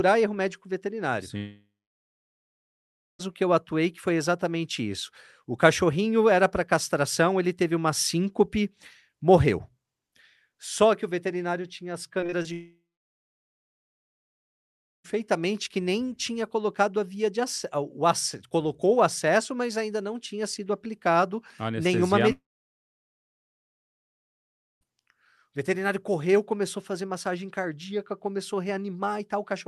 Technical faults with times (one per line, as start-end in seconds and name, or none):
1.37-3.21 long network dropout
12.21-12.47 repeated packet loss (robotic sound)
12.53-15.06 long network dropout
22.32-24.86 long network dropout